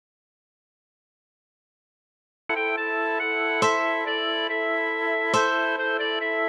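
From the very first sample to about 2.49 s there is an audio dropout to silence: the clip opens already inside the gap, with silence and no room tone or noise floor, and the sound then comes in abruptly mid-flow. The likely cause is a lost input, such as a disconnected device, a failed link or an accidental mute, while recording continued. Whatever occurred during those first two and a half seconds is not recoverable.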